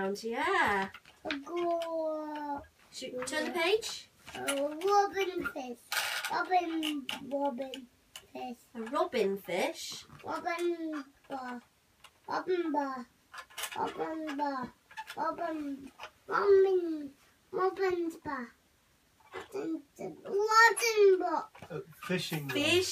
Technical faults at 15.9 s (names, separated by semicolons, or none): none